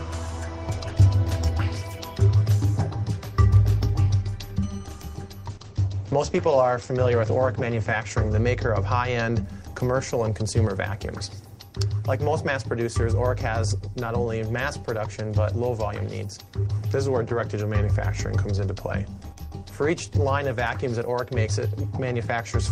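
A call bitrate drop runs from 5.48 to 9.49 s: the audio turns coarse and muffled as the top end collapses from 20 kHz to 8 kHz, which fits the encoder falling from about 32 to 12 kbps, bottoming out for nearly 3 s. Unlike packet loss, the sound never gaps or stutters.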